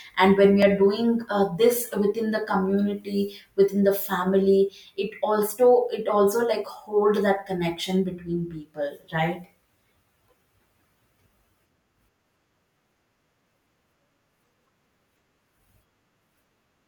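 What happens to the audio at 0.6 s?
At 0.62 s the speech drops out for a block of digital silence lasting about 0.67 ms, roughly what a 32-sample buffer left unfilled would produce. The signal cuts straight to silence and straight back, so both edges are abrupt steps heard as a single tick. A waveform shows a tiny flat line near silence with vertical jumps at each end, and a spectrogram shows a thin broadband vertical stripe at that instant.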